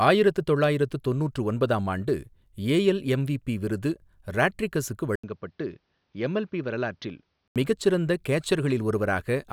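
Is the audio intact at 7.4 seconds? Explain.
No. From 5.16 to 7.56 seconds the speech turns dull and boxy, with nothing above 6.4 kHz. An 80 ms silence marks the switch. The level drops somewhat and a faint new noise floor appears. This is likely an input switched to a poorer device.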